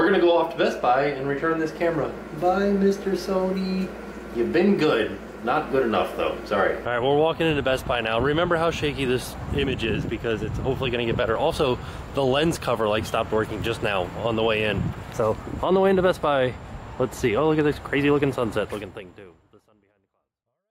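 No technical faults are audible.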